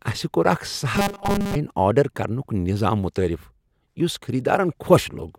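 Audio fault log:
0.95–1.56 s, robotic sound from repeated short buffers: rigid metallic 200 Hz buzz before "آرڈر کرنک", likely a 5 ms chunk replayed over most of the span; spectrogram shows flat, evenly spaced harmonic lines, waveform shows identical repeating cycles.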